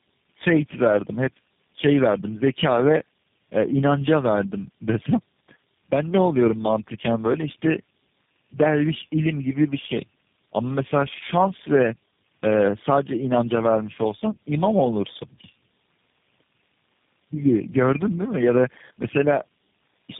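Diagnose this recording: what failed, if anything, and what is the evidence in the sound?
Codec stage: tandem speech coding throughout. The speech is rough, muffled and warbly, with nothing above 3.7 kHz. Repeated decode and re-encode through several low-rate codecs compounds the damage.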